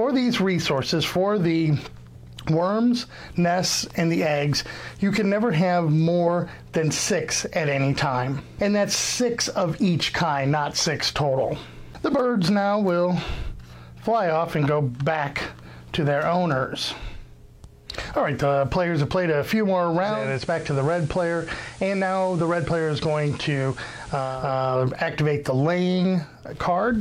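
Audio with digital radio blending to analogue between 20.01 and 24.55 s. The hybrid receiver loses the digital stream and makes a 365 ms cross-fade to the same station's FM broadcast, then blends back at the end of that span. On the FM path the level drops by about 2 dB, and a steady hiss appears some 25 dB below the programme. The hiss reflects the analogue channel's higher noise floor.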